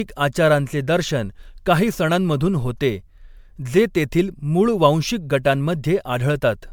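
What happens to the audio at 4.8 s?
At 4.8 s the speech has generation loss, present throughout. Likely from about seven successive MP3 passes near 128 kbit/s, each requantising on a shifted frame grid. Unlike a single low-bitrate encode, the swirl and hollowness build up and attacks smear, while the band still extends to 19.9 kHz.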